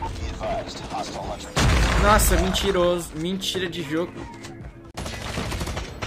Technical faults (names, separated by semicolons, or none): digital broadcast dropout